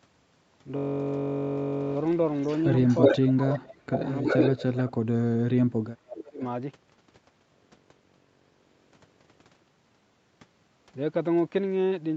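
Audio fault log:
2.41–3.17 s echo leak: a delayed copy about 0.36 s late, roughly 5 dB louder than the talker, likely from an incompletely cancelled loudspeaker; the spectrogram shows repeated, shifted harmonic bands.
3.13–3.91 s speech suppressed in double talk: the talker dips by up to about 30 dB for around half a second, likely from the canceller turning down its own talker along with the echo; the waveform shows gaps.
3.93–4.92 s echo leak: a quieter copy trailing by about 0.37 s, roughly 5 dB below the talker, likely residual loudspeaker pickup, seen as ghost harmonics behind the speech.
4.22–4.90 s speech suppressed in double talk: drops of up to about 20 dB over roughly 0.4 s, likely from canceller gating, with the waveform envelope pinched.
6.07–6.41 s speech suppressed in double talk: dips of up to about 25 dB over roughly 0.3 s, likely suppression during overlap, with brief notches in the waveform.
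6.10–6.15 s echo leak: a faint scrap about 0.38 s late, roughly 20 dB down, likely leftover loudspeaker echo, visible as a weak smear in the spectrogram.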